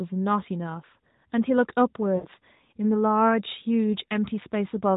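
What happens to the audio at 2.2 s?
From 2.16 to 2.27 s the speech smears into a drawn-out, fading tone and briefly drops away. These are lost AMR speech frames: about 80 ms failed, which fits four 20 ms frames, and the decoder repeated the last good pitch and vocal tract settings with falling gain.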